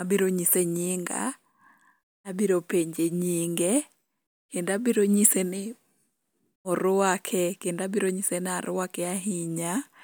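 No technical faults can be heard anywhere in the recording.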